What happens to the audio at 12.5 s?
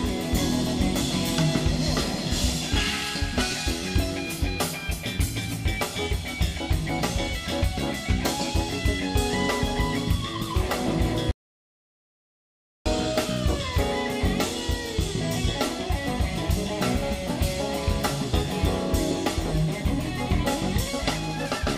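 At 12.5 s the sound is gone: an audio dropout to silence runs from 11.31 to 12.86 s, a silent gap with no room tone. The input was likely lost while the recorder kept writing silence.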